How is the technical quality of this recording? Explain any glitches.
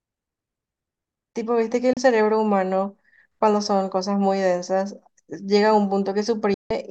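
The speech has two digital broadcast dropouts. The first runs from 1.93 to 1.97 s, a brief hole that fits one lost frame. The second runs from 6.54 to 6.71 s, about 160 ms, likely five frames. The receiver muted when frames failed, fading out within 3 ms. The sound drops to silence and the speech sent in that gap is lost.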